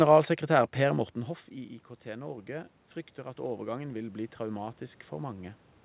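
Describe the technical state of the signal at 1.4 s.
At 1.4 s the signal is early in an automatic gain rising spanning 0.89 to 5.65 s. The input fell about 14 dB and the gain control slowly adds about 8 dB, so speech and room noise swell together: a widening waveform envelope, an evenly brightening spectrogram.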